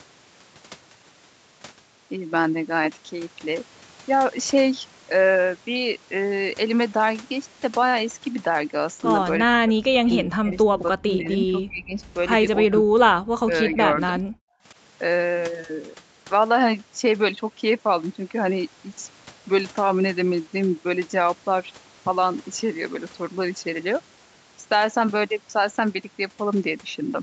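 An echo canceller likely mistook the talker for far-end echo during double talk, so speech suppressed in double talk occurs at 9.43–9.85 s, 10.02–11.97 s, 12.62–12.85 s and 13.4–14.23 s, the speech dipping by roughly 25 to 40 dB and breaking into fragments.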